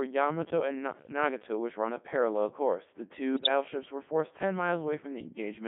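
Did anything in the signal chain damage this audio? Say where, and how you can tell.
Yes. At the codec stage, the speech passed through the Codec 2 vocoder at about 3.2 kbit/s, which keeps only pitch, voicing, energy and spectral envelope and rebuilds the voice from sine waves. Across the clip this leaves heavy, buzzy, robotic damage within a band of roughly 150 Hz to 3.5 kHz.

In the radio link, bit errors on digital voice radio corrupted the vocoder parameters from 3.34 to 3.48 s. There the pitch, level and tone colour lurch into a brief warbling burst, which fits about five frames hit at an error rate of a couple of percent.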